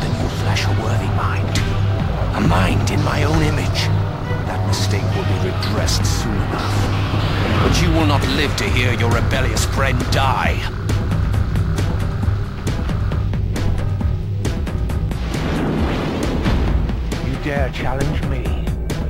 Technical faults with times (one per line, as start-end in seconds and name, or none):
none